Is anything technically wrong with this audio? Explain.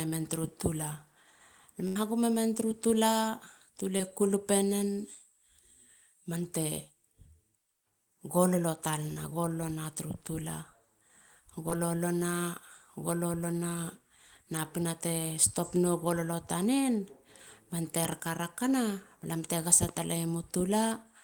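Yes. The speech has three kinds of fault: one burst of packet loss, three short concealed packet losses, and two pairs of loud pops.

From 1.87 to 1.97 s there is a burst of packet loss. About 80 ms of audio never arrived in time. The receiver stretched the last sound across the hole for about 80 ms, letting it fade. That fill is heard as a held buzz or fading hiss. The speech then picks up later, with the lost part gone.

Short concealed packet loss occurs at 3.97 to 4.01 s, 9.13 to 9.32 s and 11.69 to 11.73 s. Each time, about 20 ms failed to reach the decoder. The receiver patched the gap by extending the preceding sound, for about 15, 27 and 18 ms. It then blended back into the real audio. Each spot is a brief smear or wobble, and a short consonant may drop out.

Loud pops appear at 18.05 to 18.15 s and again at 19.89 to 19.99 s. Each is two pops in quick succession. The first pair peaks around 10 dB above the speech, the second around 5 dB. 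The cause is likely a sudden voltage spike, from a plug, switch, static or driver glitch. The speech carries on underneath the sharp clicks.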